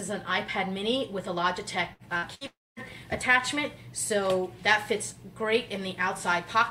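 Around 1.93 to 2.02 s, 2.17 to 2.26 s and 2.35 to 2.44 s there are three bursts of packet loss. Each time the receiver stretches the last sound into a fading buzz or hiss for about 50 to 60 ms, then jumps ahead, skipping roughly 60 ms of audio.

Right after, from 2.47 to 2.79 s, the sound thins into a fading continuation and then goes to silence for about 230 ms. That's likely a long network dropout: nothing arrived for around 300 ms, and the audio resumes further on with that stretch gone.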